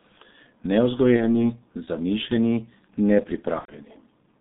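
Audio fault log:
throughout: G.723.1 codec. Heavy coding damage that fits a rate near 6.3 kbit/s. The line passes only 150 Hz to 3.7 kHz, so speech sounds muffled. The model updates slowly, once per 30 ms frame, which leaves the sound hoarse with smeared consonants.
1.16–1.49 s and 3.59–3.75 s: VoIP packet loss concealed by the speech codec. The decoder bridged gaps of 30 ms and 90 ms by reusing its last pitch and filter at falling gain, which stretches the sound out as it fades. Each frame builds on the last, so the speech stays weak or distorted for a while after each gap.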